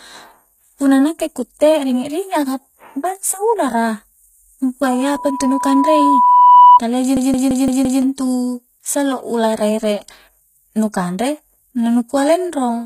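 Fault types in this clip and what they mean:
HE-AAC compression: The speech has gritty, metallic sibilants and an unnatural, synthetic-sounding treble, and nothing is present above 14.9 kHz. This is most likely a low-bitrate HE-AAC encode, around 20 kbps, in which the upper band is rebuilt by copying lower bands upward rather than being coded directly. On a spectrogram the treble looks like smeared, repeated copies of the lower harmonics, misaligned with them, ending in a hard ceiling at 14.9 kHz.
Loudspeaker feedback squeal: From 4.85 to 6.80 s, a single tone at 986 Hz swells over roughly two seconds into a squeal, ending about 10 dB above the speech. A microphone picked up its own loudspeaker, and the loop gain at that frequency exceeded one, so the tone grew on its own. A spectrogram shows a bright horizontal line at 986 Hz that thickens as it rises. The waveform envelope ramps steadily upward through that span.
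System hang loop: From 7.17 to 8.02 s, one 170.67 ms slice of audio repeats exactly five times. It forms a machine-gun stutter at 5.86 Hz, which fits an 8192-sample buffer being replayed while the system was frozen. About a second of the original audio is lost. The waveform shows identical blocks laid end to end with abrupt joins, and the spectrogram shows the same pattern stamped repeatedly, with vertical seams at each restart.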